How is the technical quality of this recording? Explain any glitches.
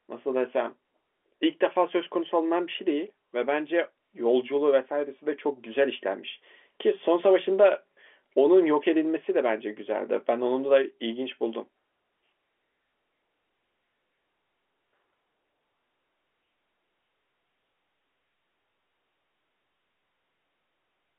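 No glitches or faults heard.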